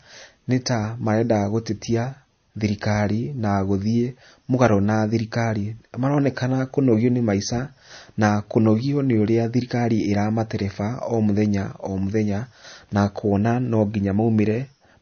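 From start to end the speech carries plainly audible damage, likely MP3 compression at a rate fitting about 32 kbps. A spectrogram shows a hard ceiling at 6.5 kHz, with weak bands flickering on and off below it, so s sounds turn watery and swirly.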